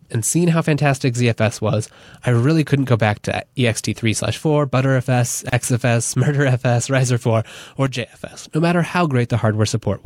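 At 5.49 s the speech is cut by a short silence of about 32 ms, ending at 5.53 s. Its edges are abrupt but slightly blurred, and the speech resumes exactly where it broke off. This is a gap at a join of encoded pieces: the audio was encoded in separate segments and spliced together without removing each encoder run's start-up delay and final-frame padding. That leftover silence sits in the middle of otherwise continuous speech.

From 7.87 s to 8.28 s the level suddenly falls by about 6 dB, then jumps back up just as abruptly. For those 0.4 s the speech sounds noticeably quieter. The likely cause is that one channel drops out: one side of the stereo signal goes missing, so when the two channels are summed to mono, the material shared between them loses half its level, and anything carried only by the missing channel vanishes.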